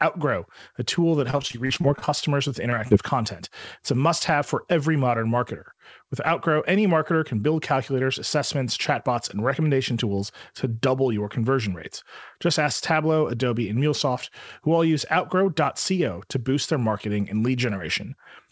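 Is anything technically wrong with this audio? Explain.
Yes, there are two kinds of packet-loss fault, both near the start of this speech clip.

From 1.20 to 2.09 s, just after "a tool", there is repeated packet loss (robotic sound). About a dozen holes open in quick succession, the longest roughly 38 ms, and about a quarter of that stretch is filled in by the receiver extending the previous audio. The result is choppy, with pieces missing. On a spectrogram the harmonics turn into smeared, repeated blocks with ragged breaks. The waveform shows stuttering, copied-looking cycles.

Two short concealed packet losses follow, at 2.70 to 2.74 s and 2.88 to 2.93 s, each missing about 20 ms. The decoder bridged each gap by continuing the last sound, from its pitch or as shaped noise, and then crossfaded back. Each one is heard as a brief smear or wobble. On a spectrogram it shows as a narrow vertical patch of blurred, slightly repeated texture. 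The waveform has a short section whose cycles look copied rather than continuous.

The call path itself fits a G.722 link, with nothing above 8 kHz.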